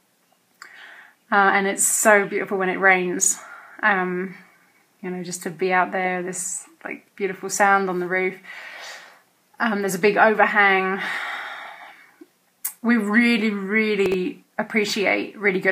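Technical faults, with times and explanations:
3.22–3.26 s, chunks out of order: a 20 ms slice plays one chunk late, so the audio briefly jumbles across three hard joins.
14.06–14.14 s, chunks out of order: a 20 ms chunk lands about three chunks late, giving a longer scrambled blip where the pieces butt together.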